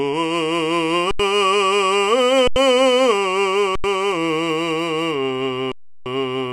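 Underruns with held sample stop the music at 1.11, 2.48 and 3.76 s for 85 ms, and at 5.72 s for 341 ms. The output freezes flat, then resumes where it stopped, softly.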